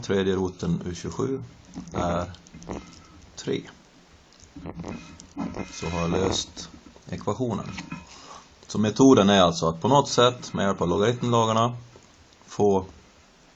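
No technical faults can be heard anywhere in the clip. There is nothing to mark on its timeline.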